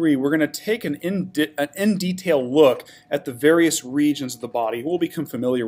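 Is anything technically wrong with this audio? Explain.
No, no technical faults are audible.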